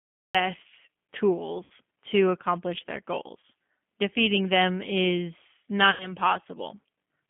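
G.729 codec damage runs through the whole clip. The sound is confined to a telephone band of about 200 Hz to 3.4 kHz, and the roughness is plainly audible. The speech is rebuilt from a vocal tract filter, a pitch predictor and a few pulses per frame rather than carried as a waveform, so it comes out slightly buzzy and synthetic. That character fits an 8 kbit/s G.729A stream.

A cut-off start occupies 0.0 to 0.35 s. The clip opens on digital silence, and at 0.35 s the speech switches on abruptly in the middle of a sound, with no natural onset or fade-in. The recording or stream evidently began late, catching the talker partway through.

VoIP packet loss concealed by the speech codec occurs three times. From 1.64 to 1.72 s, just before "to accomplish their", about 60 ms is missing, which fits two lost packets. From 3.40 to 3.44 s, right after "to accomplish their", about 30 ms is missing, consistent with a single packet. 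From 5.91 to 6.12 s, after "them is", about 90 ms is missing, which points to three packets. In each gap the decoder keeps extrapolating from its last pitch and filter state while lowering the gain. The sound therefore smears into a fading buzzy or coloured tone, and because each frame builds on the previous one, the speech stays weak and distorted briefly after audio resumes. The gap near 6 s is the longest.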